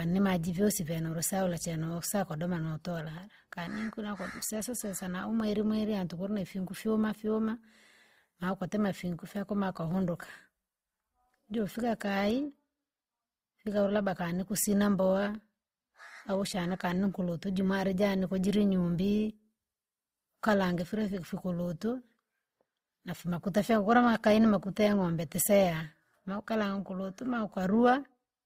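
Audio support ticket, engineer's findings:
Full-length speech with layered codec artefacts; nothing above 15.9 kHz. Likely transcoding between lossy codecs: MP3 at 64 kbit/s, then Opus at 24 kbit/s, the Opus pass adding its own artefacts to the MP3's.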